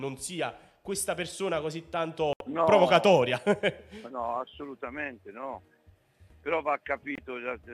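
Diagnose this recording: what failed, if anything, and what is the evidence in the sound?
The failure is a digital broadcast dropout at the receiver's decoding stage. The sound cuts abruptly to silence from 2.33 to 2.41 s, a hole of 72 ms. A second, shorter gap runs from 7.15 to 7.18 s and lasts 24 ms. Both gaps are clean mutes, not noise bursts. The receiver lost frames or rejected them on checksum and muted until valid ones arrived. The durations fit three lost frames of 24 ms, then one. The missing audio is gone.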